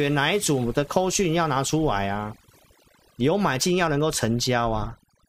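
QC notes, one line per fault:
Throughout: overdone noise removal. Noise reduction was pushed too hard on this speech. Frequency bands near the noise estimate get cut almost to nothing, taking quiet speech detail with them. Gaps fall to near silence with twinkling specks.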